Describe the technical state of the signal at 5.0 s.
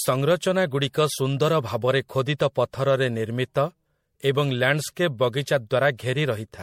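At 5.0 s you're hearing generation loss, which runs through the whole speech clip: swirly, smeared and hollow, with blurred attacks and nothing above 16.5 kHz. It sounds like around five passes through MP3, likely at 64 kbit/s, each requantising on a shifted frame grid so the noise and spectral holes pile up.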